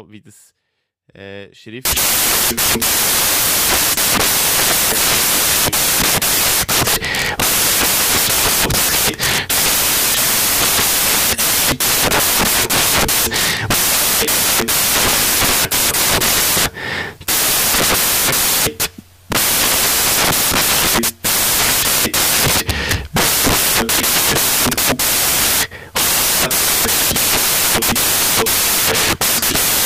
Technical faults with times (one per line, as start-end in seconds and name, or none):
1.85-29.86 samples built from the wrong bytes